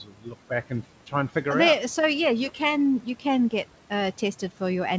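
A short speech recording carried over a wideband call link opens with speech cut by the noise suppressor between 0.03 and 0.33 s. For about a fifth of a second in that span, the suppressor mistook soft speech for background and pulled it down by up to about 12 dB, so the first sounds come out swallowed and faint. On a waveform the opening envelope looks dipped and thinned compared with what follows. On a spectrogram the low-level consonant energy fades out patchily, as if gated along with the room noise sitting about 21 dB below the speech. Nothing appears above 8 kHz, which fits a wideband call codec such as G.722.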